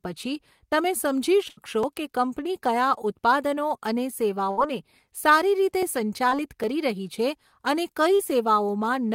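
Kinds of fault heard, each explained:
Burst of packet loss: a run of packets went missing or arrived too late, so the receiver extended the last sound and faded it down before jumping ahead. At 1.49 s about 80 ms is gone, at 4.51 s about 60 ms, each heard as a brief held buzz or fading hiss.
Short concealed packet loss: a few hundredths of a second failed to reach the decoder in time, and the receiver patched the hole by continuing the preceding sound, then blending back. At 6.29 s (20 ms) and 8.15 s (40 ms) this comes across as a quick smear or wobble.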